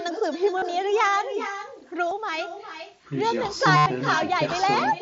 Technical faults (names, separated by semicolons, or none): echo with no canceller; concealed Bluetooth headset packet loss